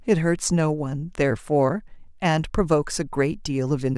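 No technical faults are audible anywhere in this recording.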